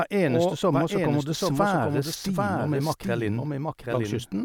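Throughout the speech, a doubled audio track is present: a second, full-band copy trails the original by about 0.7 s, roughly 5 dB quieter, with no decay or room colour. The likely cause is the signal being captured again through a slower path.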